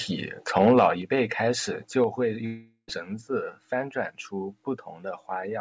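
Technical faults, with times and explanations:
0.56–0.88 s, microphone overload: peaks run about 3 dB past the converter's limit and a small share of samples are flattened, likely from excessive input gain, giving harsh crackle.
1.02 s and 2.04 s, microphone volume stepped down: level drops abruptly by about 5 dB before "辈开始", then about 4 dB after "辈开始", likely automatic gain reduction after hot peaks.
2.46–2.90 s, long network dropout: about 420 ms of audio is lost, likely from a network gap. A fading synthetic buzz fills it, ending in 70 ms of silence before "子翻转出" resumes.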